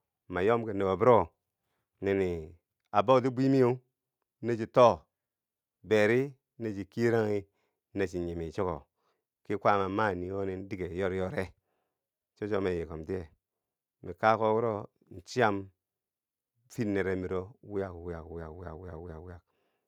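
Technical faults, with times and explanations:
No technical faults, with times or otherwise, are present in this speech clip.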